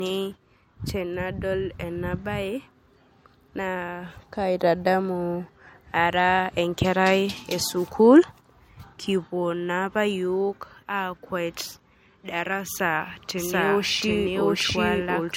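From the first second the speech has most likely been through low-bitrate MP3 encoding and then saved again as a higher-bitrate MP3, so it is low-bitrate audio saved at a high bitrate. The first pass threw away detail that the second cannot put back. Nothing sounds above 16.6 kHz, which points to an original around 64 kbit/s. The larger re-encode, likely near 192 kbit/s, carries those losses unchanged to the end.

At 13.37 s a doubled audio track appears, most likely a second copy of the same speech mixed in from a slower path. The copy arrives about 0.7 s behind the original and at about the same level. It covers the full band, with no decay or room colour. It cuts in abruptly and runs to the end of the clip, so everything from there on is heard twice.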